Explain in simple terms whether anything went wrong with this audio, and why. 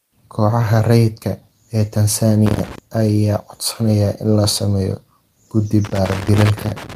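A worn or dirty plug contact kept connecting and disconnecting, a loose connector crackle. That chops the speech into scratchy, irregular crackling, from 2.46 to 2.78 s just before "ayaa codsanaya in", and again from 5.85 s after "sameeyo guddi" to the end.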